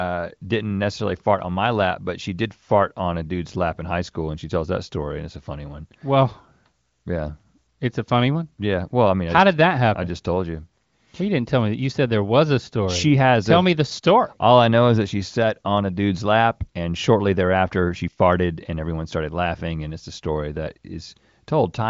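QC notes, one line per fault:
The speech carries the band-limited character of the AMR wideband (HD Voice) codec, with nothing above about 7.5 kHz, and its coding damage is faint at most, which fits a high AMR-WB rate around 23 kbit/s.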